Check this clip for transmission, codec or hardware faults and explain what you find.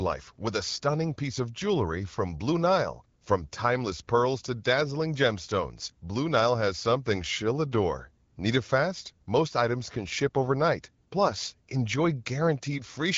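No faults found: the speech comes through the AMR wideband (HD Voice) codec at 12.65 kbit/s with light coding texture and the expected band limit, nothing above 7.5 kHz.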